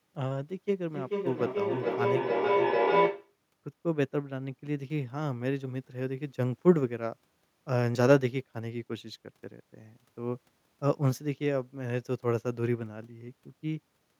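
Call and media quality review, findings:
Feedback echo between two devices, 0.89 to 3.38 s. Speech returns at a fixed interval of roughly 0.4 s, thinner and more ringing on each pass, building to about 3 dB above the direct speech instead of decaying. Probable component: a second device in the same room replaying what the first device's microphone sent, which that microphone picks up again, outside the reach of either echo canceller. Unlike a single canceller-leak echo, the repeats stack and grow.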